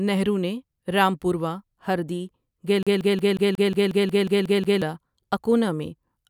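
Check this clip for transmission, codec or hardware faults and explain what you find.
One hardware fault is audible, a CD stuck on one turn. From 2.83 s to 4.82 s the speech locks into a fast, even stutter: a single slice of about 0.18 s plays eleven times in a row, each pass cut off by a brief mute before it starts again. A scratch is knocking the laser back one track at the same point on every rotation, so the player keeps rereading the same short stretch of audio.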